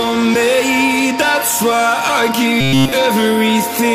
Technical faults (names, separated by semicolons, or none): robotic sound from repeated short buffers